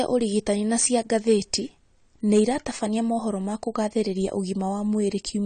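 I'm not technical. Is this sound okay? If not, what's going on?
No. Throughout the clip, the speech was likely squeezed into a small file with AAC compression, which throws away detail to save space. Everything above about 9 kHz is missing, so the voice sounds dull and smeared, with audible warbly, fizzy damage.

There is also hard clipping, from 0.79 to 1.54 s and from 2.32 to 2.41 s: the sound was too loud for one stage to pass, so its loudest moments were cut off flat. That adds a crackly, distorted edge, and the overload is greater in the first stretch.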